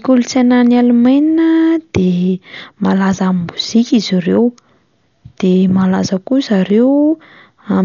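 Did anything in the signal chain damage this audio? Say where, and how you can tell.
Yes. At the codec stage, the speech was likely coded as Dolby Digital at a low bitrate, consistent with about 48 kbps. It has nothing above 7 kHz and heavy dull, fluttering noise throughout.

At the driver or buffer stage, a block of digital silence 0.19 ms long appears at 6.70 s. The unfilled samples drop abruptly to zero and back, which makes a brief tick.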